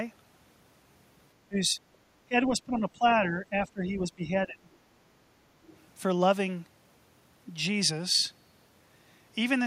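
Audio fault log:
1.48–1.79 s, 2.26–3.04 s, 3.2–4.7 s: speech suppressed in double talk. Speech drops by around 20 dB in pieces, likely an echo canceller ducking both sides during overlap.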